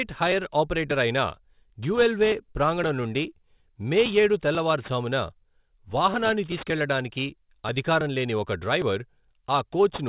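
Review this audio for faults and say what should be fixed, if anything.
Sibilants and fricatives throughout the speech sound gritty and metallic, with harsh tones that don't belong to the voice piling up against a hard ceiling at 4 kHz. That is aliasing: the audio appears to have been taken from 48 kHz down to 8 kHz without a low-pass filter first, so everything above the 4 kHz fold point reflected back into the band as false frequencies, sitting roughly 20 dB below the speech. To prevent it, resample with a proper anti-aliasing filter that removes content above 4 kHz before the rate is reduced.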